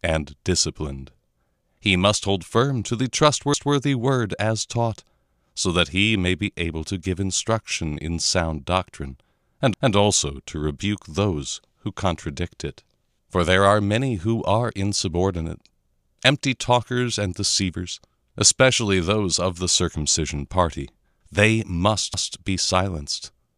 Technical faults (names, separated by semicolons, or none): overlapping chunks